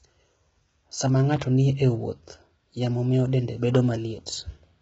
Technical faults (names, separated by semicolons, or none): low-delay AAC compression